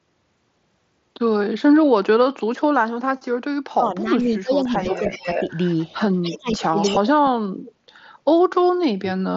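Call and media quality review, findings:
Speech suppressed in double talk, 3.73 to 5.35 s. Talker level ducks by up to about 20 dB, roughly one second affected in total. Probable component: echo canceller. It likely treated overlapping talk as echo and attenuated the whole path. Repeats at 6.37 to 6.78 s, dipping about 25 dB. Worst at 6.95 to 7.46 s, about 40 dB down, near cutout.

Echo leak, 4.84 to 5.95 s. Delayed copy of the talker, about 0.3 s late, about 10 dB below direct speech. Probable component: far-end loudspeaker echo canceller. Residual likely passed its suppression and returned. Shorter scraps at 6.12 to 6.38 s and 6.82 to 7.00 s, both about 15 dB down. Last at 7.66 to 7.73 s, about 25 dB down. Band ends near 7.7 kHz, consistent with the mSBC headset link.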